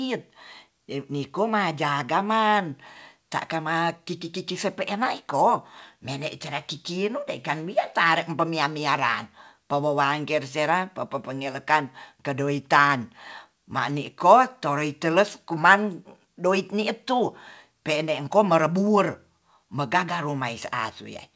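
No technical faults can be heard in this speech, which comes over a wideband call path with nothing above 8 kHz.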